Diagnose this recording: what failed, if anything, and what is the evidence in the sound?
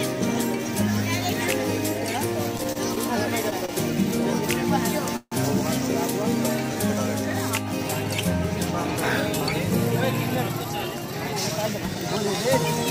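Repeated stalls (stutter) between 2.57 and 2.98 s: five brief holds, the longest 26 ms, fill about 70 ms, roughly 17% of that stretch. Late network packets kept emptying the jitter buffer. The waveform shows repeated cycles of the same shape, and the spectrogram shows short smeared patches.

A short stall from a late packet at 3.66 to 3.70 s holds the sound for 28 ms. One packet missed its slot, so the receiver stretched the last waveform period until it arrived, visible as a copied cycle.

From 5.16 to 5.34 s the sound freezes into a 151 ms fill: a fading buzz ending in 50 ms of silence, then resuming where it stopped. This call audio freeze was likely caused by packets held up in the network. The spectrogram shows flat horizontal streaks fading to blank.

A jitter buffer speed-up runs from 10.53 to 11.13 s. The audio plays at 107% speed with unchanged pitch, and about 50 ms has been trimmed. 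The receiver cut pieces of one or a few pitch periods repeatedly to drain excess buffered delay, compressing the waveform's spacing without shifting spectrogram harmonics.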